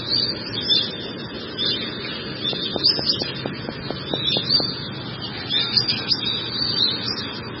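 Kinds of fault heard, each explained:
MP3 compression: throughout, nothing above 5.6 kHz and a heavy, watery swirl, likely from MP3 encoding at a starved bitrate that fits about 16 kbps.
Train of clicks: 2.53 to 4.61 s, about ten regular clicks at 4.35 per second, about 20 dB above the sound, likely from interference or a faulty connection.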